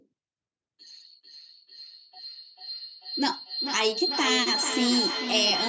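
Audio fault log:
1.23 s to the end: feedback howl. A second device in the same room on the same call has closed a loop in which each trip from microphone to loudspeaker and back returns louder than it left, so the sound keeps building rather than dying away. It narrows to a shrill tone around 4 kHz, pulsing roughly every 0.4 s with the loop's delay. It rises to about 3 dB below the speech and never breaks off.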